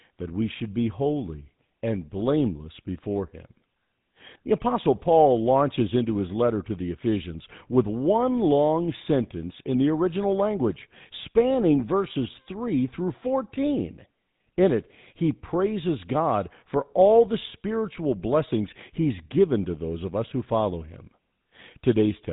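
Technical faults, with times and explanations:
Throughout, GSM full-rate codec: the speech passed through the original GSM coder, which fits a rate of about 13 kbps. It models the vocal tract and excites it with sparse, regularly spaced pulses, discarding everything above 4 kHz, so the speech sounds band-limited, buzzy and gravelly.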